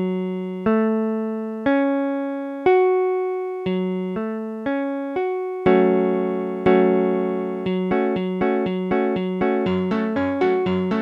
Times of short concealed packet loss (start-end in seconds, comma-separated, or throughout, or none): none